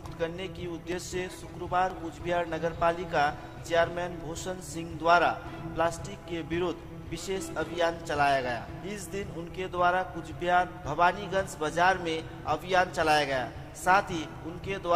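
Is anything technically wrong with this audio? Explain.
Yes, there are three isolated clicks, at 0.92 s, 1.90 s and 14.36 s. Each is a single sharp tick, the kind dropped samples produce: a tiny slice of the stream, well under a millisecond, likely went missing, so the waveform jumps straight from one value to a later one. That step is too brief to take out any sound, but the discontinuity itself pops out as a click and would show as a thin vertical line on a spectrogram.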